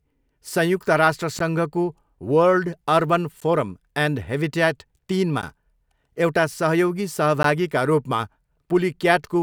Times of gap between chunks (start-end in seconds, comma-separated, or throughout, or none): 1.39, 3.40, 5.42, 7.43